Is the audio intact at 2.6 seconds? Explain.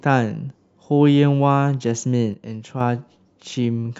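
No. From 2.33 to 2.81 s the speech drops abruptly by about 6 dB, likely one channel dropping out and halving the mono sum.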